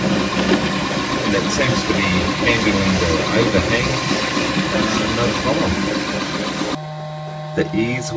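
No technical faults can be heard anywhere in the audio; the signal stays steady and intact throughout.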